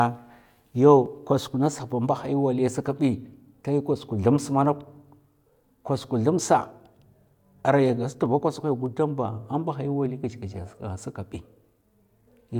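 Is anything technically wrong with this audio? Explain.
Yes. From 0.46 s to 12.46 s, a click recurs every 0.6 s through the speech. These are likely clock drift buffer slips, where mismatched device clocks force a few samples to be dropped or repeated. Each slip shows as a thin vertical stripe on the spectrogram and a step in the waveform.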